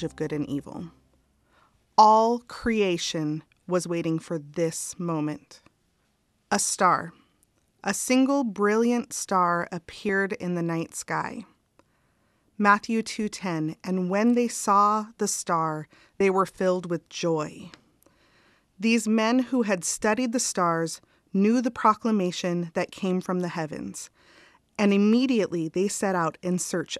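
A speech recording with two instances of compressed frames skipped, at 10.09 s and 16.20 s. Each time the speech jumps forward by roughly 30 ms, which fits the loss of a single 26.1 ms frame that was either missing or rejected by the decoder as damaged. Because adjacent frames overlap, each join is a short smeared blip, not a sharp click. On a spectrogram, the harmonic traces shift abruptly at a faint, blurred vertical seam, and the waveform shows a slight discontinuity in its envelope.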